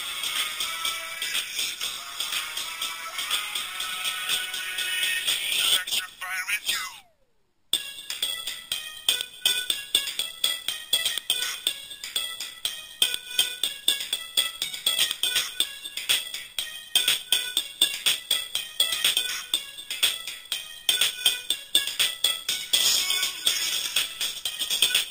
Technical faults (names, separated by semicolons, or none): imaging from sample-and-hold upsampling